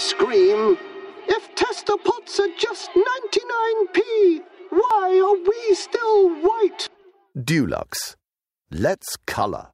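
Compressed frames skipped at 4.82 to 4.91 s and again at 6.87 to 7.04 s: whole frames of the encoded stream never reach the output, either absent from the file or rejected by the decoder as corrupt. The sound lurches forward, losing roughly a tenth of a second the first time and about three tenths of a second the second.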